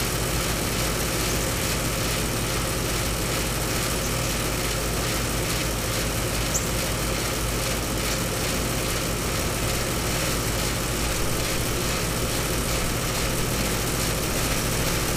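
This everyday-sound recording has two brief stutters, one at 4.19 to 4.24 s and another at 10.24 to 10.29 s, where a sliver of audio seems to jump back and play again. This is overlapping chunks. The audio was handled in blocks about 6 s long, and each new block began 50 ms before the previous one finished, so that 50 ms plays twice at each join, six seconds apart.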